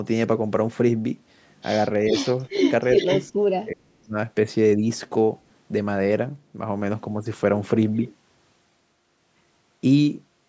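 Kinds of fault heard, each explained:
Echo leak: A copy of the speech trailing about 0.42 s behind comes back around 2.1 and 2.6–3.3 s, likely loudspeaker pickup the echo canceller missed.
Speech suppressed in double talk: The speech dips briefly near 3.1 s, then nearly vanishes from 3.48 to 4.16 s, likely the canceller clamping down while both ends overlapped.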